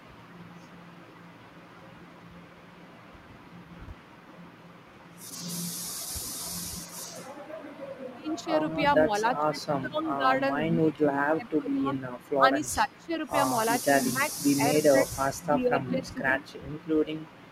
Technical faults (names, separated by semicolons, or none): sample clock jitter; echo leak; speech suppressed in double talk